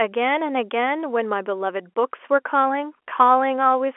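Nothing goes wrong here at all: it's just speech carried over an ordinary G.711 telephone line, with everything above about 3.7 kHz gone, as you'd expect from a phone call.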